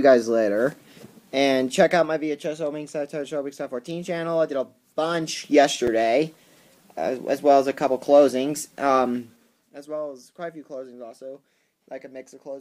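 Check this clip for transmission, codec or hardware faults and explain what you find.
One fault stands out: a block of digital silence at 5.87 s, lasting about 5 ms. The audio drops straight to silence and returns with no fade, and a gap this short is heard as a tick or dip rather than as silence. It likely points to output samples not being delivered in time. On a waveform it appears as a flat silent stretch between two abrupt edges. A spectrogram shows a thin vertical broadband stripe at each edge, with an empty sliver between them.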